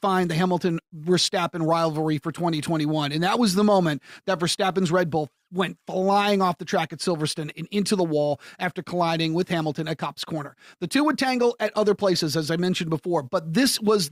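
Speech recording, and nothing is technically wrong with it.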